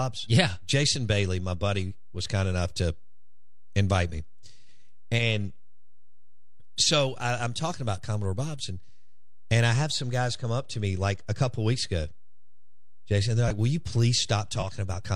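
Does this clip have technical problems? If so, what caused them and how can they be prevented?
Yes. The speech carries a DC offset from start to finish, a constant shift of about -36 dBFS that pushes the whole waveform off the centre line. It cannot be heard as a sound. On a waveform the trace sits slightly above or below zero even in pauses, and a spectrogram shows a steady band at 0 Hz, while the offset quietly uses up headroom. It can be prevented by using a high-pass filter or DC-blocking stage in the recording chain.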